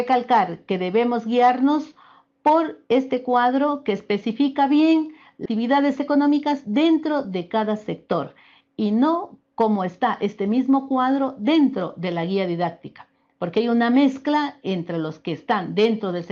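At 5.45 s the stream skips ahead: around 0.4 s of audio was discarded, either lost in transit or dropped from an overfull jitter buffer, and playback jumps straight to later material with no fill. The two sides butt together almost seamlessly, so content simply vanishes.

From 5.55 to 7.25 s a jitter buffer speed-up follows. The receiver trims short pitch-period segments repeatedly to shed surplus delay, playing about 8% fast while pitch holds steady. Roughly 0.15 s is removed, giving a slightly rushed quality through the Opus path's 12 kHz band.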